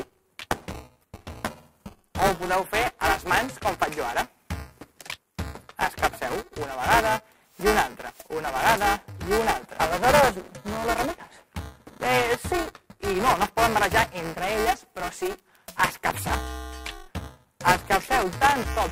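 A steady robotic buzz at 375 Hz rides on the sound throughout, present only while there is signal. This is buffer tearing: writer and reader of a ring buffer have slipped, so roughly a sixth of each period, which fits a 128-sample buffer, replays audio about 10 ms stale, with hard joins.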